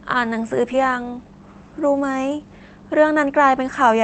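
At 0.73 s the audio does a skip ahead. A block of roughly 0.7 s of speech is discarded while later audio is already queued, so playback lands on the later material with no gap and no fill. Unlike a dropout or packet-loss concealment, there is no silence, buzz or smeared stretch. The two sides simply butt together, and the listener hears a sudden jump in the flow where a chunk of speech has vanished.

From 0.82 s to 3.64 s a jitter buffer speed-up follows. The receiver trims short pitch-period-sized slices again and again to drain surplus buffered audio, removing about a third of a second in all. Speech runs at 112% of normal rate and sounds hurried, but the pitch stays put. That unchanged pitch separates it from a resampling or clock-rate error, where speed and pitch would rise together. Throughout, the Opus call path caps the bandwidth at 8 kHz, and its coding texture points to a bitrate around 24 kbps.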